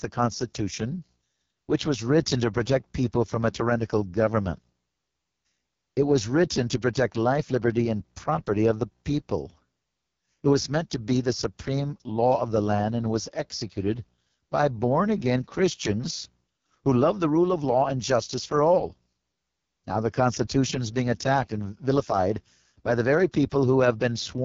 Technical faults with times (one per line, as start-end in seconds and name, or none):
0.00-24.45 AMR wideband (HD Voice) codec